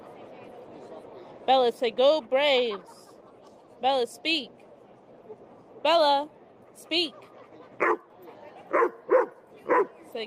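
No technical fault can be heard anywhere in this audio. There is no moment in the recording that stands out as a problem to point to.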